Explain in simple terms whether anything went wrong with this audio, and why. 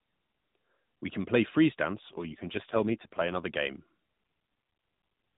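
Something did go wrong. Just after "can play freeze", from 1.96 to 3.46 s, there is an AMR rate drop: the phone-call codec switched to far fewer bits, so the speech turns rough and buzzy without any gap, then recovers once the higher rate returns.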